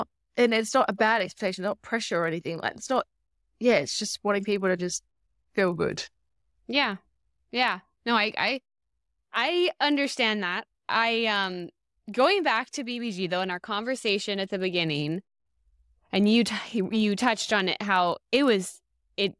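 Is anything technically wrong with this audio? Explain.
Yes, there's a resampler restarted on every block, and it runs through the whole speech clip. The converter handled each 40 ms chunk in isolation, so at every chunk edge it had no real neighbouring samples to work with and left a small glitch. That gives a tick 25 times a second, which blurs into a buzz riding on the speech, gone in the pauses. The band-limited character fits a halving conversion, something like 48 kHz down to 24 kHz.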